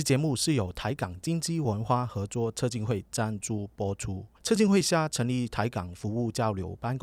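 A steady 25 Hz buzz runs under the speech from the start to 4.16 s, riding only on the signal itself and falling away in pauses. It comes from a resampler restarted on every block: each 40 ms chunk was converted separately, likely from 48 kHz to 44.1 kHz, so the filter lacked the neighbouring samples at every chunk edge and left a small error there, repeating 25 times a second.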